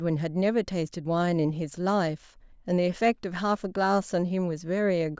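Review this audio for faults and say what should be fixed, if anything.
Nothing here needs fixing; I listened through and didn't catch any technical faults in the speech.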